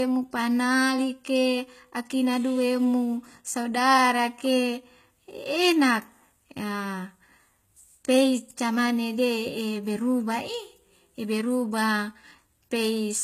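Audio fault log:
Throughout: HE-AAC compression. The treble stays bright but sounds synthetic, with s sounds turning gritty and metallic, and nothing at all above about 14.9 kHz. The likely cause is HE-AAC v2 at a low rate, which fits roughly 20 kbps. Only the lower spectrum is truly coded, and the upper bands are rebuilt by copying lower content upward under a coarse envelope. The copied harmonics don't line up with the real ones.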